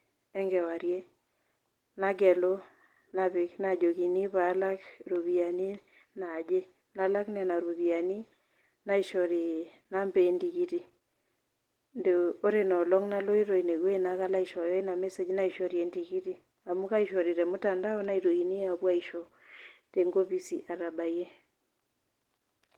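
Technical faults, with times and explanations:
Throughout: Opus voice compression. The damage is plainly audible across the whole speech clip, with a hoarse, slightly robotic edge and a coarse texture. That fits around 16 kbps in Opus's hybrid mode, where the linear-prediction layer codes the band below 8 kHz and a thin transform layer fills in the top. At that rate the excitation is coded roughly, frame by 20 ms frame, so the grain stays on everything rather than coming and going.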